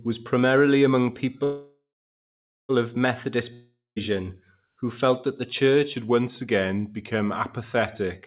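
Speech carried over a narrowband call path that cuts everything above 4 kHz, which fits a G.711 A-law telephone codec. A call audio freeze, likely from packets held up in transit draining the jitter buffer, begins at 1.44 s right after "was primarily among". The last sound carries on as a fading buzz, then about 0.83 s of silence, before resuming at 2.71 s with nothing lost but everything afterward delayed by 1.25 s. A long network dropout, likely caused by packets that never arrived, runs from 3.53 to 3.98 s. It fades into roughly 0.16 s of silence, and about 0.44 s of audio is skipped when sound returns. A drift correction step, likely from clock-matching software changing the playback rate to rebalance its buffer, slows playback by 5.7% from 5.94 to 8.14 s. This drops the pitch by 102 cents, about a semitone, before it snaps back.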